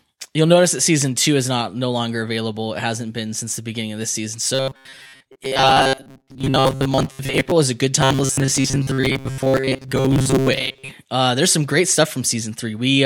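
From 4.55 to 7.52 s, after "beginning of this season", and again from 8.02 to 10.91 s, after "is a good", the speech becomes robotic sound from repeated short buffers. It turns into a rigid metallic buzz at 133 Hz. Late audio likely forced about 7.5 ms chunks to repeat, replacing most of the real signal.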